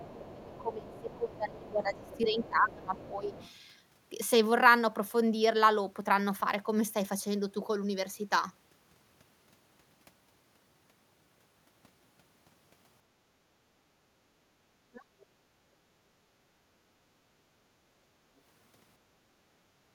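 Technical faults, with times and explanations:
0.00–2.49 s and 2.95–3.51 s, other side's voice leaking through: a faint second voice sits about 25 dB, then about 20 dB, under the talker. It is likely loudspeaker echo the canceller missed. Unlike gating, something is added rather than removed.
0.00–3.35 s, speech suppressed in double talk: the talker's own voice dips, by about 20 dB at its deepest, for roughly 3 s in total while the leaked voice is present. The likely cause is the canceller treating both talkers as echo. What drops is the voice, not the room.
13.08–14.38 s, background gated by the echo canceller: the room sound sinks by up to about 10 dB for about 0.7 s of this span, then returns. The canceller clamped the microphone while the loudspeaker played. Here only the background drops, not the talker's voice.
14.82–15.12 s, speech suppressed in double talk: a short, deep bite of roughly 35 dB takes the talker's voice almost away for about 0.3 s. 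This is likely the canceller again attenuating everything when both sides overlap. It is a voice dropout rather than a background dip.
15.20–15.26 s, other side's voice leaking through: a brief scrap of the far voice, about 35 dB down, slips through just after the previous dip. It is likely residual echo that escaped suppression. It is an added fragment, not missing sound.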